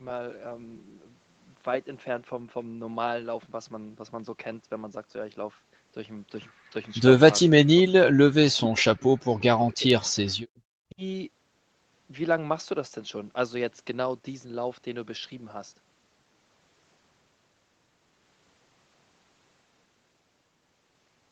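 Between 7.46 and 8.36 s, 8.61 and 9.3 s, 9.56 and 9.88 s, and 10.54 and 11.02 s, the speech drops by up to roughly 40 dB, which is likely speech suppressed in double talk, with the echo canceller muting the near talker.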